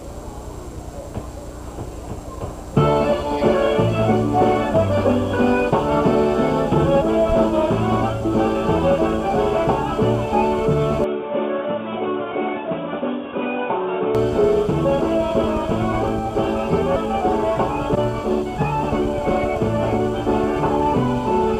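At 11.04 s the sound abruptly goes dull and boxy, with nothing above 3.8 kHz, and it drops a little in level, maybe 5 dB or so. A new, faint background noise floor also comes in, sitting well below the signal. There's no gap at the switch, just a sudden change of tone. At 14.15 s the full-band sound returns. That's likely the input switched to a poorer device, such as a headset's call profile, for those three seconds.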